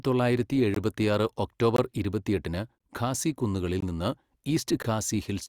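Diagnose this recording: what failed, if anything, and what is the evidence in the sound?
Gap between chunks at 0.74, 1.76, 2.78, 3.80 and 4.82 s: hard-edged 20 ms silences every 1.0 s in the speech, the second just before "ഇരുപത്തിയെട്ടിന് ഖാസി കുന്നുകളിൽ നിന്ന്", where the audio is interrupted at each chunk boundary.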